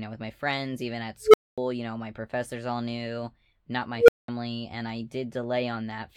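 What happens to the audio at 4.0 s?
A tone of around 500 Hz rises out of the speech at 3.96 s, swelling to a harsh, clipped squeal in about 0.12 s, then the audio drops to silence for 0.2 s until 4.28 s. This is an unstable filter: a recursive filter with bad coefficients feeds its own output back with growing gain, so the signal climbs without limit, clips, and overflows. The sound stays cut until the filter resets.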